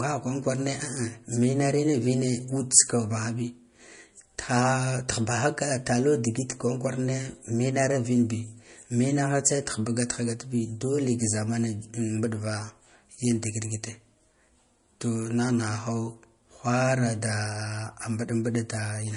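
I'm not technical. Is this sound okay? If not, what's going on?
No. Throughout the whole clip, this speech shows low-bitrate audio saved at a high bitrate. Nothing is heard above about 10.6 kHz, so it lacks crispness and air. The file was likely first squeezed hard by MP3, which threw away those high sounds, and then saved again at a much better setting. Saving it at a better setting can't bring back what was already discarded, so the file is larger without sounding any better.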